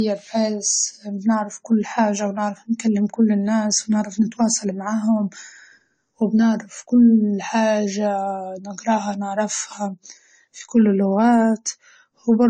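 Throughout, the speech sounds dull, with nothing above 9 kHz, pointing to transcoding between lossy codecs, likely Vorbis then AAC-LC, stacking both sets of artefacts.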